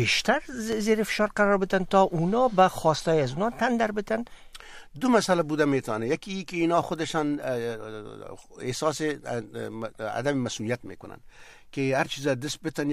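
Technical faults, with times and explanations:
0.72–0.75 s and 5.30–5.33 s: loud pop, single sharp thumps about 10 dB then about 5 dB above the sound, likely a brief voltage pulse from a switch, plug or static.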